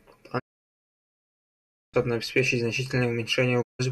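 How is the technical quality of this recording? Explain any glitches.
The speech is interrupted twice by digital broadcast dropouts. The first runs from 0.38 to 1.96 s, roughly a second and a half of silence. The second runs from 3.61 to 3.81 s. In both, the receiver stopped getting decodable frames, either from signal loss or failed checksums, and muted its output until clean frames returned. Each gap opens with a quick fade of about 20 ms rather than a hard click. Whatever was broadcast during those holes is simply gone.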